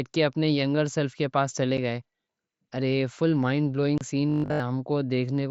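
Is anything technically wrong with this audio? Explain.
Yes. The speech has two separate faults.

Unconcealed Bluetooth headset packet loss occurs at 1.77 s, just after "ینگر سیلف کے پاس", and again from 3.98 to 4.01 s. Audio packets between headset and phone were dropped, and nothing was generated to cover them. The sound simply cuts out. The first hole lasts 7.5 ms, which fits a single lost packet. The second lasts 30 ms, which points to about four in a row. Each one is a brief dropout with hard edges that can click. On a waveform they show as sudden flat gaps. On a spectrogram they appear as thin vertical blank stripes, with broadband ticks at the edges.

Robotic sound from repeated short buffers runs from 4.30 to 4.60 s. Fresh audio stopped arriving in time, so the playback side kept looping the most recent 20 ms chunk, and for the whole stretch the repeated chunk replaced the real signal. 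This is likely a buffer underrun. The looping imposes a rigid 50 Hz buzz, so the speech turns into a flat, metallic buzz. On a spectrogram this shows as evenly spaced horizontal harmonics every 50 Hz. On the waveform it shows as an identical repeating pattern with a 20 ms period.

The mSBC headset link itself adds only light graininess, and its bandwidth stops at 8 kHz.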